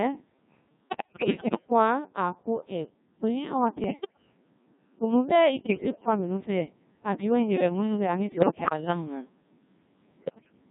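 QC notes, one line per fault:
Throughout: Codec 2 vocoder, heavy damage at 1.6 kbit/s. Only pitch, voicing, energy and a rough spectral envelope get through. The decoder rebuilds the speech from sine waves and never keeps the real waveform, so everything comes out robotic and buzzy.
0.89–1.7 s, 3.84–4.22 s, 5.6–6.06 s, 8.32–8.73 s, 10.16–10.52 s: bit errors on digital voice radio. Flipped bits hit the vocoder frames. Error rates run around 10 to 15 percent, heaviest in the first and last bursts. Each corrupted frame throws off pitch, level and tone colour, so these stretches jump around and break into warbly, bleepy gibberish.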